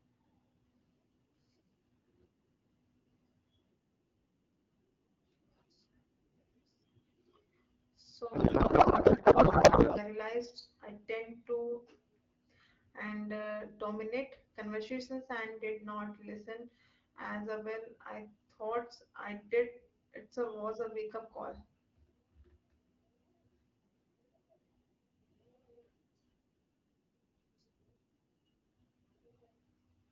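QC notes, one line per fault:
8.33–10.04 s, codec payload misread: for about 1.7 s the speech gives way to garbled noise and warble that barely tracks the talker, then clean decoding returns. The AMR frames were packed octet-aligned but read as bandwidth-efficient, so every field lands in the wrong bit positions and the decoder builds nonsense from valid-looking data. On a spectrogram the harmonic striations and formant bands vanish into smeared broadband texture. The waveform envelope stops following syllables.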